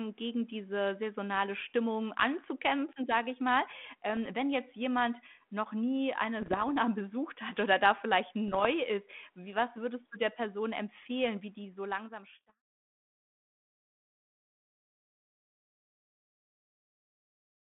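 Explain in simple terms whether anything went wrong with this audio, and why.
Yes, there are bit errors on an ADPCM link, like a bad cordless-phone line. Rough, popping bursts hit at 6.40 to 6.70, 8.48 to 8.66 and 12.30 to 12.57 s, the first just after "jemand noch nie eine". They ring on briefly rather than dropping out silently.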